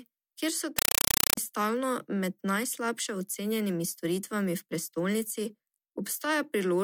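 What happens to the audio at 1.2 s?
At 1.2 s the speech is replaced by a compressed stream played as audio, from 0.79 to 1.37 s. Undecoded AC-3 data, consistent with a 256 kbps stream, is heard as loud chattering static. The waveform shows 5.33 ms bursts repeating at 31.25 Hz, and the spectrogram shows matching broadband vertical stripes separated by silent gaps.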